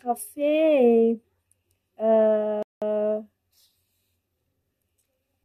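At 2.63 s the speech just stops dead and sits in silence until 2.82 s, then picks up exactly where it left off. That's a rebuffering stall: the player burned through its downloaded audio, had nothing left to play, and waited for more data to arrive. Nothing gets skipped or garbled, so you don't lose any of the speech. You just get roughly a fifth of a second of dead air wedged into the middle.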